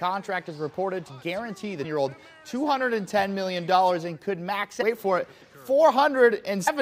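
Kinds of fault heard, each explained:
Damaged data in a compressed stream: brief glitches at 1.84 s, 4.81 to 4.83 s and 6.67 to 6.69 s, where corrupted bytes in the encoded file make the decoder misread frames, lose sync and hunt for the next valid frame header.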